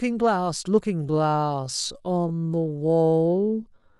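From 1.0 s to the end of the clip, the speech slows abruptly to about 0.54 times its original pace while its pitch stays put. That points to a time-stretched section, likely produced by software lengthening the audio by repeating short slices of it. The slowed speech drags. On a spectrogram, harmonics keep their spacing but syllables spread wider, and the waveform shows stretched, repetitive-looking envelopes.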